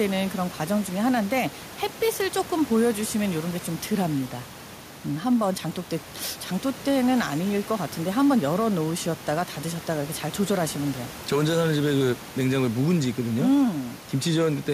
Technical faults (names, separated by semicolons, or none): none